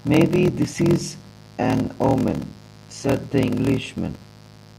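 Speech runs through the whole clip with two faults layered together. The first is mains buzz: a steady, raspy buzz built on 60 Hz harmonics, sitting roughly 25 dB under the speech. Its sharp, rasping edge, with energy reaching into the kilohertz range, comes from switching spikes off a dimmer, rectifier or poor shielding, which tells it apart from a smooth, pure hum. The second is a block size mismatch (padded). A slower, coarser 41.7 Hz buzz is heard as a short silent gap repeating in every block, and the speech is drawn out to 0.889 times its normal speed while keeping its natural timbre. That pattern fits 1024-sample blocks zero-padded into 1152-sample reads at 48 kHz. The intact timbre separates it from a plain slowed playback.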